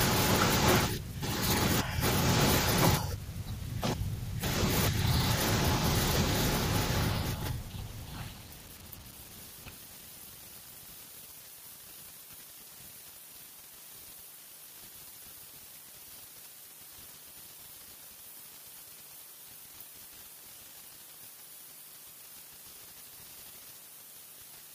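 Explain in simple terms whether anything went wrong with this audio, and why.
Nothing went wrong here: the speech comes through steadily the whole way, with no dropouts, glitches or odd noises to catch the ear.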